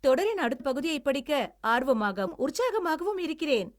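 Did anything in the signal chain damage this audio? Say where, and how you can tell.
Yes: compressed frames skipped at 0.59 s, in decoding. About 70 ms, a few 26.1 ms frames, vanishes; the spectrogram shows a smeared seam, not a click.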